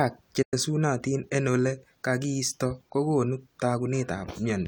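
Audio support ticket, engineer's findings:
Digital broadcast dropout, 0.42 to 0.54 s. Speech fades out over about 8 ms, then silence. Receiver muted on corrupt or missing frames. The 96 ms gap fits roughly three lost frames. Content in the gap is gone.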